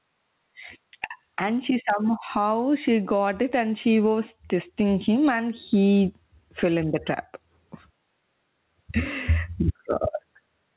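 Speech, band-limited with nothing above 4 kHz as expected from a narrowband call codec, and it suffers gain pumping throughout. The gain swings by around 15 dB, pulled down under each loud syllable, likely from input gain set far too high with a fast limiter clamping it. The waveform looks flattened, with loud and soft parts squashed closer in level.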